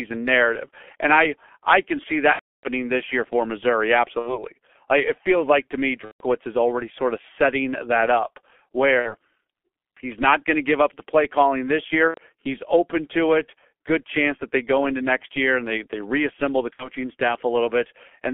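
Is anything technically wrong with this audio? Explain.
Yes. Throughout, the speech is muffled, hoarse and narrow, with smeared consonants and nothing below about 300 Hz or above 3.4 kHz. This is the G.723.1 codec's heavy damage. It fits a bitrate around 6 kbit/s, where a coarse, slowly updated voice model replaces fine detail in 30 ms frames.

At 2.33–2.66 s, 4.19–4.43 s, 6.05–6.24 s, 8.99–9.15 s, 12.08–12.18 s and 16.74–16.88 s, the speech stretches into a buzzy tone or coloured noise that fades, and stays weak just afterwards. This is VoIP packet loss concealed by the speech codec. The decoder extends its last pitch and filter while lowering the gain. The longest gap, at 2.33 s, fits about ten lost frames.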